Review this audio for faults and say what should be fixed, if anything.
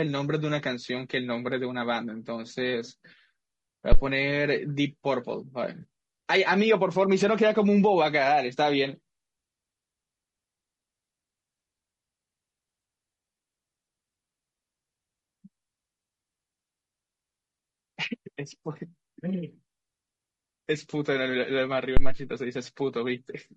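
Throughout the clip the speech sounds rough and grainy, with noise filling the gaps between harmonics and a thin, synthetic-sounding top band. This is likely low-delay AAC compression (AAC-ELD), whose roughly 20 ms frames resolve pitch harmonics poorly; the damage is plainly audible and fits a bitrate around 32 kbps. To prevent it, raise the bitrate or use a longer-frame codec when low delay isn't essential.

A deep phantom power thump occurs at 3.92 to 4.01 s, dying away within about 20 ms, and again at 21.97 to 22.21 s with a longer tail of about 55 ms. Each happens when a supply is switched on or off while the input is live, and the voltage step passes through the coupling capacitors as a low-frequency pulse. To prevent it, mute the channel before toggling phantom power.

At 5.81 to 5.85 s there is a brief smeared, noisy patch where the sound loses definition. This is AAC frame loss with concealment: the decoder filled a gap of about 20 ms from the last good spectrum. 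The gap fits a single lost frame. To prevent it, strengthen the transport with error protection or retransmission.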